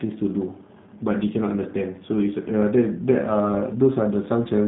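The speech runs through a G.729 codec for its whole length, a low-rate telephony coder whose sound points to roughly 8 kbit/s. Instead of keeping the waveform, it models each short frame with a vocal tract filter, a pitch predictor and a handful of pulses, then resynthesises. Everything above about 3.8 kHz is gone, so the voice sounds narrow and dull, and the coding damage is plainly audible as a rough, buzzy, slightly synthetic texture.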